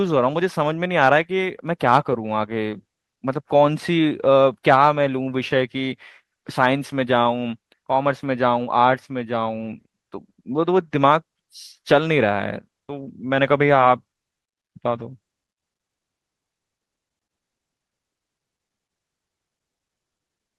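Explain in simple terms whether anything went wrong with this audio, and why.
Nothing went wrong here.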